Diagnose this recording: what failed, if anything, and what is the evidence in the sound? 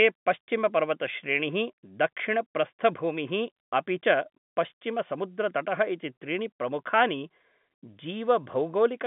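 Nothing has failed here; the speech simply has the narrow, boxy character of an ordinary G.711 telephone line, with the band running from roughly 150 Hz to 3.5 kHz, which is just what that path normally sounds like.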